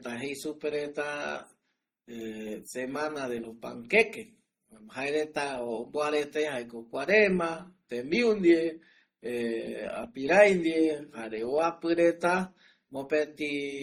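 From start to finish, the speech carries two different kinds of compression damage at once, which is the signature of transcoding between lossy codecs. The pattern fits an MP3 pass at around 32 kbit/s followed by an Opus encode at a similar rate, and that chain is the likely cause. The top end sits at the lower of the two cut-offs, and MP3's swirly, smeared artefacts come through with Opus's own coding grain layered over them.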